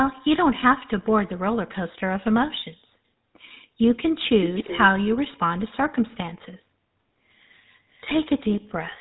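From start to finish the speech carries the buzzy, gravelly roughness of the GSM full-rate codec, and nothing above 3.8 kHz survives. The coder rebuilds the voice from a vocal-tract model fed by sparse, regularly spaced pulses, a sound that fits the 13 kbps full-rate mode. That pulse-driven grit is what separates it from plain band-limiting or a generic low-bitrate codec. Simple narrowband audio would be dull but smooth, without this coarse texture.

A faint scrap of the voice returns at 4.24 to 4.29 s, then a much more noticeable stretch from 4.45 to 4.87 s, and a barely audible trace at 8.87 to 8.93 s. Each repeats earlier speech 285 ms late. This is echo leak, most likely sound from a loudspeaker reaching the far-end microphone and getting past an incomplete echo canceller. Reverb would smear continuously, but here the copies are discrete and delayed.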